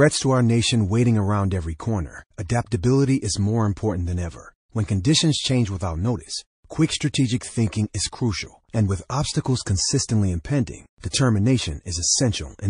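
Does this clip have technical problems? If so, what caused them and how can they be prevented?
Yes. Throughout, the speech sounds watery and swirly, with treble cut off flat on a spectrogram and speckled gaps. This is likely MP3 compression at a low bitrate, around 40 kbps. A higher bitrate prevents it.

Pre-echo puts hiss about 39 ms long and about 24 dB above the floor, starting at 11.00 s, before an attack, and hiss about 31 ms long and about 20 dB above it, starting at 11.10 s, before another attack. On a waveform or spectrogram it shows as a smear ahead of each attack, because long blocks spread the noise. Block switching prevents it.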